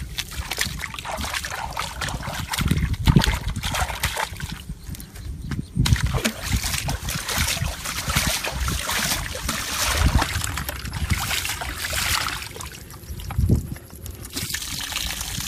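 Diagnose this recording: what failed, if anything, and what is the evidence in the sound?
Section at the wrong speed, 10.22 to 14.54 s: sound plays 1.26 times fast, about four semitones high, likely from a playback clock mismatch. On a spectrogram, harmonics jump upward; the waveform looks compressed in time.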